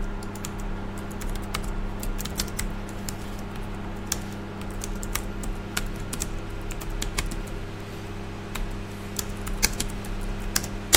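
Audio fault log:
9.65 s, hard clipping: a peak driven about 5 dB past full scale is cut flat, adding high harmonics heard as a brief crackle on that transient.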